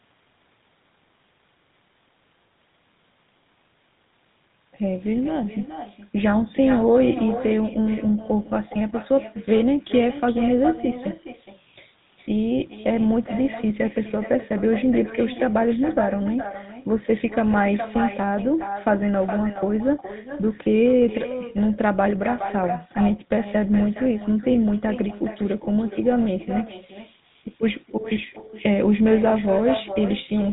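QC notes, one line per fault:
Throughout, echo with no canceller: the far end's loudspeaker feeds its microphone and nothing cancels it, so every phrase returns around 400 ms later, about 12 dB down, as a thinner shadow trailing just behind the original speech.
Throughout, GSM full-rate codec: the pulse-driven vocal-tract model discards most of the excitation detail, giving plainly audible buzzy, gravelly roughness, with nothing above 3.8 kHz; the character fits a roughly 13 kbps GSM full-rate stream, dulling and coarsening the speech.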